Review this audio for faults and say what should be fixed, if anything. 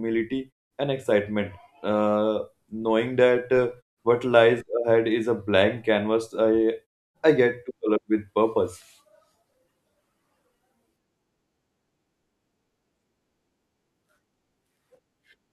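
No faults turn up in this audio, so nothing needs to be fixed.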